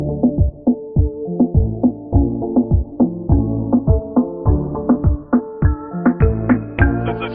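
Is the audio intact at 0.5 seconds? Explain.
Yes, the audio is intact at 0.5 seconds, with no dropout, click, distortion or other fault at that point.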